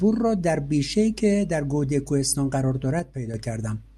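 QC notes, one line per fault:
2.99 to 3.34 s, one channel drops out. The speech suddenly falls by about 6 dB for roughly a third of a second, then returns. This likely comes from one stereo channel going silent. Folded to mono, the shared content halves, and anything unique to that channel vanishes.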